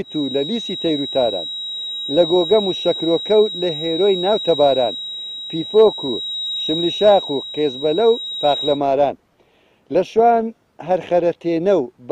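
From the start to 8.83 s, a feedback whistle sits around ten decibels below the sound: a thin, steady 3.8 kHz tone, swelling and fading slowly, likely from a loudspeaker-to-microphone loop held just short of runaway. A spectrogram shows one bright horizontal line at 3.8 kHz.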